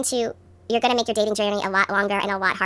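The speech throughout sounds high and hurried, running 1.5 times too fast and pitched about 7 semitones up. This is a wrong sample rate fault: the samples are played faster than they were captured, with no conversion, which fits 16 kHz material played back at 24 kHz.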